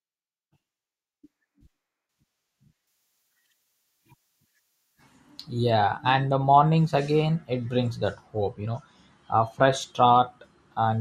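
Pre-emphasis left on from 2.87 to 5.71 s in this speech clip, just before "and the mornings again": the FM-style 50 µs treble boost went uncorrected, leaving 10 kHz about 10 dB hot, thin and sibilant.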